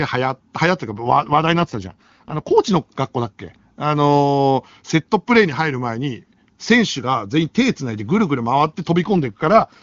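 An AMR rate drop runs from 0.89 to 2.51 s and again from 9.03 s to the end of the clip. Both times the speech turns rougher and more synthetic, with no gap and no loss of bandwidth. This fits the link falling back from 23.85 to 8.85 kbit/s, trading coding detail for error protection on a weak radio path. Clarity returns once the rate climbs back between the two episodes.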